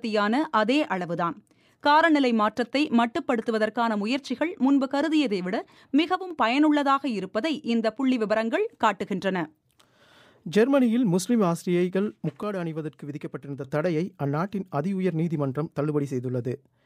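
At 6.15 s the sound drops abruptly by about 6 dB for a brief 0.15 s, then returns at 6.31 s. The same dip recurs from 12.43 s to 13.64 s, lasting about 1.2 s. The likely cause is one channel dropping out. When one stereo channel goes silent, the mono sum loses half of the shared material. Sound present only in that channel is lost entirely.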